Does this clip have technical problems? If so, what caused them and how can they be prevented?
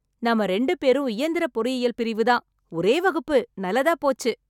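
No, there are no technical problems in this speech recording. Since nothing went wrong, there is nothing that needs preventing.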